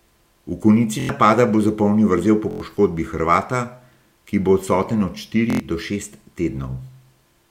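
At 1.00, 2.51 and 5.50 s the speech catches on a repeated buffer. New audio arrived late, so the same 23 ms piece, which fits a 1024-sample buffer, replays four extra times. Each event is a 0.09 s stutter with hard joins, and roughly a tenth of a second of speech is skipped.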